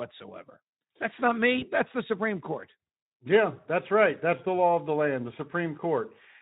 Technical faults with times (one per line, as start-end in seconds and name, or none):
1.59-1.65 VoIP packet loss concealed by the speech codec